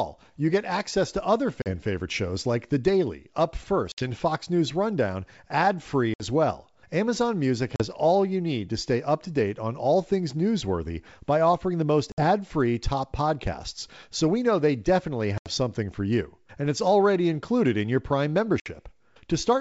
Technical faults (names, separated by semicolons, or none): packet loss on an ADPCM call